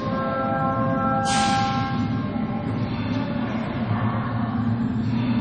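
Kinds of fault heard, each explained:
Low-bitrate audio saved at a high bitrate: nothing sounds above about 10.3 kHz throughout. This likely comes from a 32 kbit/s MP3 later re-encoded at 256 kbit/s.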